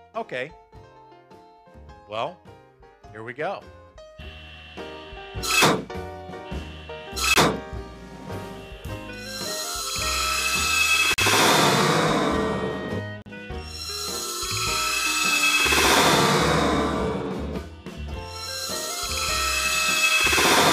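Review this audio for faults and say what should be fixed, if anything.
Block of digital silence at 7.34–7.36 s (20 ms), 11.14–11.18 s and 13.22–13.26 s (40 ms each): samples drop abruptly to zero and back with no fade. Prevent it by filling output buffers before their deadline.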